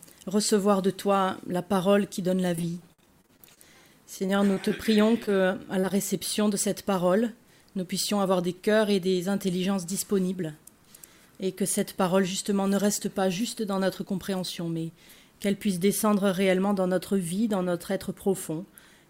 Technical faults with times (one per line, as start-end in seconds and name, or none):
2.55-3.59 repeated packet loss (robotic sound)
4.19-5.92 repeated packet loss (robotic sound)
8.12-9.15 jitter buffer speed-up